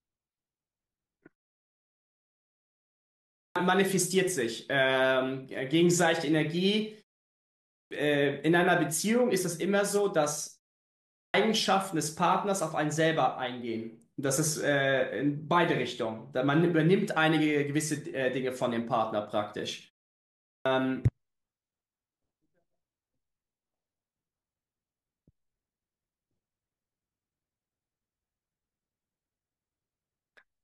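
Four times the speech bursts out of silence already mid-sound, its onset missing: at 3.2 s (about 0.36 s lost after a 1.9 s pause), 7.52 s (0.39 s lost after 0.57 s), 10.98 s (0.36 s lost after 0.47 s) and 20.29 s (0.36 s lost after 0.47 s). This is clipped start after a pause: the output device sleeps during silence and needs roughly a third of a second to wake, swallowing the first sounds.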